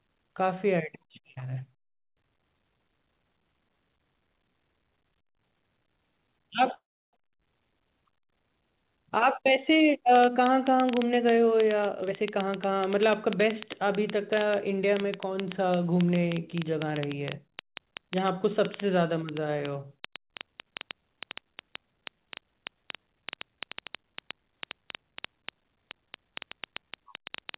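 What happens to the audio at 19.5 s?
A train of clicks runs from 10.16 s to the end: about 6.6 irregular pops per second, likely interference, peaking about 10 dB over the speech, showing as thin vertical spectrogram streaks and sharp waveform spikes.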